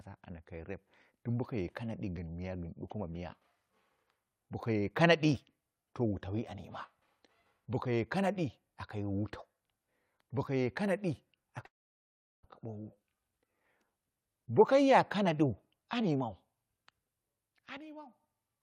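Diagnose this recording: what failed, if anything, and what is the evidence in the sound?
Long network dropout, likely at the network stage: from 11.65 to 12.45 s the speech stops, a brief fading fill gives way to about 0.74 s of silence, and the lost section never returns.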